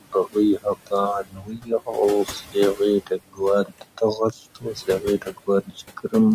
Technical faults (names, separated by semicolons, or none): noise suppressor artifacts; speech cut by the noise suppressor